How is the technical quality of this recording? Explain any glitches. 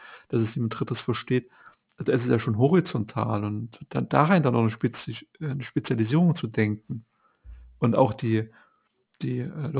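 The recording has one real problem, and it runs the whole way through: aliasing. It sounds like the speech was taken down to a much lower rate, which fits a drop from 48 kHz to 8 kHz, without filtering first. Anything above the new 4 kHz limit folds back down to unrelated frequencies instead of being cut. You hear it as gritty, metallic sibilants and a faint junk layer, roughly 25 dB under the speech, with the top end pushed hard against 4 kHz.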